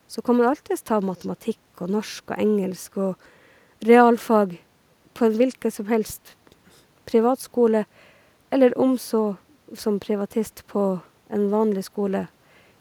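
No technical faults can be heard anywhere in the speech recording. There are no events to place in time order.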